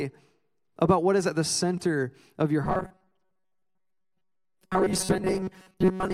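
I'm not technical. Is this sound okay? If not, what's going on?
No. From 2.64 s onward, new audio likely arrived too slowly, so the system filled most of the gaps by replaying tiny 5 ms snippets. This robotic sound from repeated short buffers turns the speech into a rigid, metallic buzz at 188 Hz.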